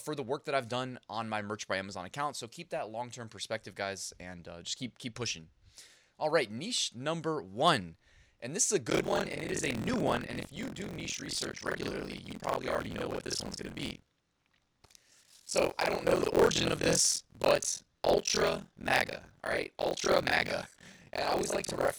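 From 8.89 s to the end, the program filling the playback ring buffer and the hardware draining it have drifted into each other, causing buffer tearing. About half of every period replays speech from roughly fifty milliseconds earlier, spliced in with hard edges. The result is a steady robotic buzz at 43.1 Hz riding on the speech, which fits a 1024-sample buffer.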